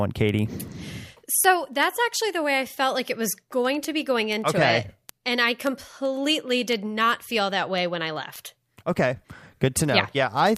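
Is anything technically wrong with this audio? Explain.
Yes, there are word clock ticks running through pretty much the whole thing, from about 0.2 s to 10.57 s. You get a sharp little tick roughly every tenth of a second, uneven in strength, running through the speech. It sounds like the digital link was read by a device on its own clock, out by something around 200 ppm. Each time the clocks slip past each other, a sample gets dropped or repeated and a few get misread.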